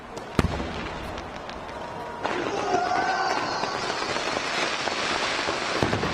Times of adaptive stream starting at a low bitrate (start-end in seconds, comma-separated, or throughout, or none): 0.00-4.64